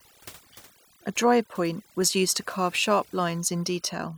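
Speech with overdone noise removal running the whole way through. The noise reduction was set too hard for the noise it faced, so any frequency band sitting close to its noise estimate gets pushed right down or gated off, and the softer parts of the voice get caught along with the noise. The background drops and breaks up into little twinkling, warbling specks.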